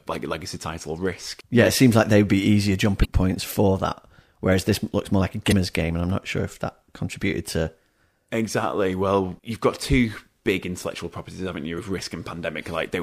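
Damaged data in a compressed stream shows up three times in this speech, at 3.01 to 3.05 s, 5.49 to 5.53 s and 11.75 to 11.79 s. Each time, a short run of the encoded bytes is corrupt, so the decoder misreads those frames, loses sync and hunts for the next valid frame header. Each event is a 40 ms burst of garbled output that breaks into the speech as a brief chirp or squawk.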